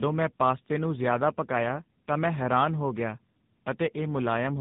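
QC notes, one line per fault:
Throughout: tandem speech coding; rough, muffled, warbly speech with nothing above 3.8 kHz fits GSM full rate recoded into AMR-NB, compounding damage.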